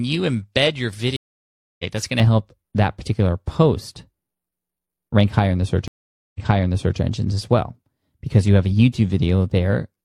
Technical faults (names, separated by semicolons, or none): stream reconnect; de-emphasis applied wrongly